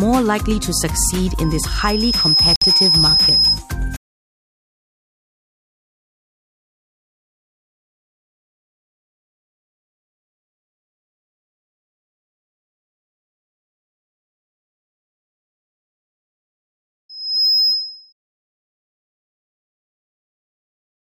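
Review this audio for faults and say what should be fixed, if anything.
There's loudspeaker feedback squeal twice, from 1.43 to 3.62 s and from 17.09 to 18.13 s. Both times a 5.1 kHz tone swells up, over about a second the first time and under half a second the second, and ends up roughly 5 dB above the program. That's the mic picking up its own speaker, with the loop gain going past one at that frequency. To prevent it, pull the mic back from the speaker or notch out 5.1 kHz, so the loop never reaches unity gain.

There's also a 58 ms dropout to silence from 2.56 to 2.62 s, right in the middle of the first squeal. Playback then resumes. That pattern is likely a Bluetooth stall, where delayed packets let the headphone buffer run empty until the resends arrived. To prevent it, cut down the radio interference or keep the devices closer together so packets don't get held up.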